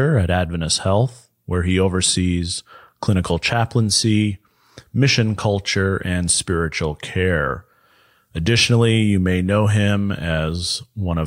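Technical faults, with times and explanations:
No technical faults can be heard in this speech recording. There is nothing here that needs a time or an explanation.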